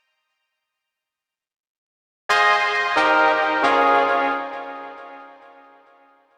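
From the start of the clip to the end there is a steady buzz at 50 Hz, present only while sound is playing. It comes from a resampler restarted on every block. The conversion, which fits a 44.1 kHz to 48 kHz change, was run on each 20 ms block in isolation. At every block edge the filter lacked the real neighbouring samples, leaving a small discontinuity. These repeat fast enough to fuse into a buzz rather than separate ticks.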